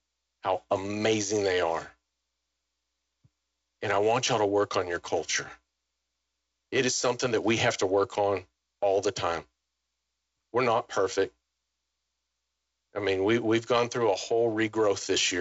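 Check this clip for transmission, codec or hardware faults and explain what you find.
Nothing stood out on listening to this speech recording.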